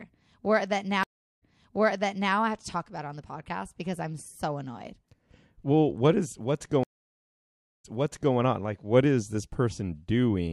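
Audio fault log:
1.03–2.34 s, stream reconnect: the speech drops out for about 367 ms, then resumes 940 ms earlier, repeating material before "I have to talk". The connection broke, the player reconnected and a fresh decoder restarted mid-stream, with the server resending a burst of earlier audio.
6.83–8.35 s, stream reconnect: after "what is what's" the speech goes silent for about 964 ms and comes back 549 ms earlier, so a stretch is heard twice. A dropped connection forced a reconnect, and the server resent earlier audio into a newly started decoder.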